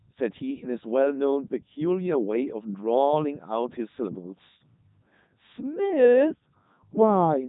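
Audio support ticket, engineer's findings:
Robotic, buzzy speech for the whole clip, no content above 3.8 kHz, heavy damage throughout. Probable component: Codec 2 vocoder, consistent with its 3.2 kbit/s mode. Mechanism: only pitch, voicing, energy and spectral envelope are transmitted, and the decoder rebuilds speech from sine waves, so the original waveform is gone.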